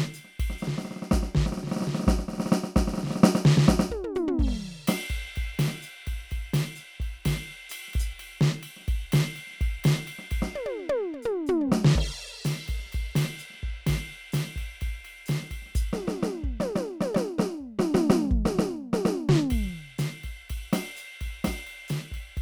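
A music recording with no technical faults audible anywhere in the signal.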